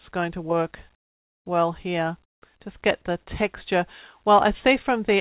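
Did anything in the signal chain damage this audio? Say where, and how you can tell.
Yes, at the call-processing stage. From 0.95 to 1.46 s and 2.24 to 2.42 s, the background becomes a smoother noise, about 25 dB and about 23 dB quieter. That's likely comfort noise in place of the background: the sender paused transmission, and the receiver filled the gaps with synthetic noise.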